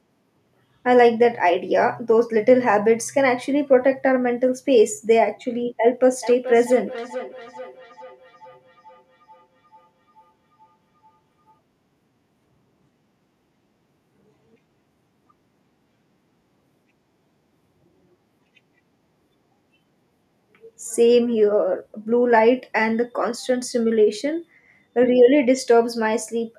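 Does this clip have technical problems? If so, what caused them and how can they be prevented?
Yes. A feedback echo between two devices appears from 6.12 to 11.59 s: a second device plays this microphone's audio back, and the microphone captures it again, so speech returns roughly every 400 ms, about 17 dB below the original. To prevent it, mute or disconnect the second device in the room.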